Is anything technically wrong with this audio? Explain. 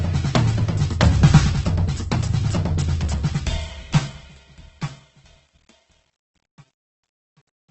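Yes. There are two faults in this music clip.

Opus compression is heard throughout. The sound is likely Opus in its music mode at a very low bitrate, consistent with about 12 kbps. Nothing is heard above 8.2 kHz, so the top end is cut away. At so few bits, the encoder keeps each band's energy but fills the detail with folded or noisy content. Tones lose their purity and turn rough and grainy. The damage is heavy.

Truncation distortion on a fade runs from 3.12 s to 7.71 s. The music fades out from around 3 s. But the fade appears to have been computed with too few bits and no dither, which fits an 11-bit word length. As the level drops toward the smallest step, the waveform collapses into coarse square steps. It is worst from 4.66 s to 7.71 s. The quiet tail turns gritty.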